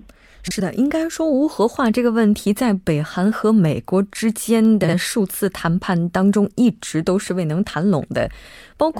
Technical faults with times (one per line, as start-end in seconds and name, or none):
0.47-0.60 frames out of order
4.83-4.94 frames out of order
8.44-8.54 frames out of order